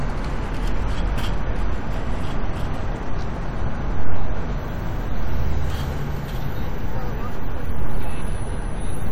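No technical faults can be heard anywhere in this recording of sound: the signal stays continuous and intact throughout.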